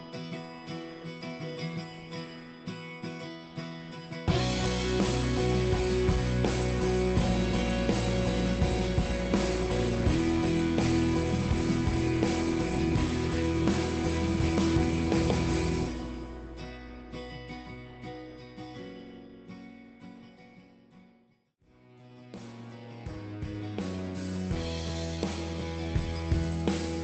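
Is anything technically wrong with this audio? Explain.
No, nothing is technically wrong with this audio.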